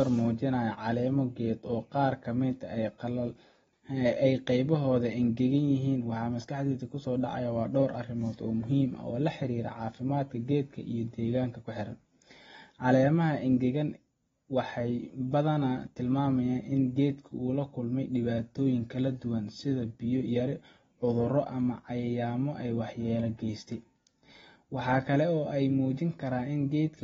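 Throughout the speech, the audio has likely passed through heavy AAC compression, with the encoder starving the signal of bits and discarding everything above 7.6 kHz. The damage is plainly audible: with nothing reaching the upper band, the speech sounds dull and muffled. Sibilants come out fizzy and smeared instead of crisp, and sustained sounds carry a warbling texture. That combination points to a low bitrate, around 24 kbps, on the AAC-LC codec.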